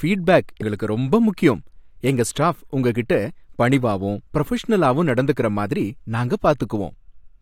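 Speech clip with compressed frames skipped in two places. At about 0.61 s the audio jumps ahead by roughly four frames, around a tenth of a second lost, and at 4.23 s it skips about two frames, roughly 50 ms. Each jump is a whole number of 23.2 ms frames that never got decoded, either missing from the file or rejected as damaged.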